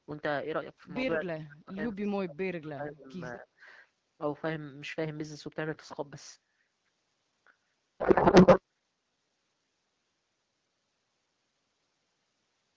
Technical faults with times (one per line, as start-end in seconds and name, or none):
1.16-3.65 speech suppressed in double talk
7.99-8.60 codec payload misread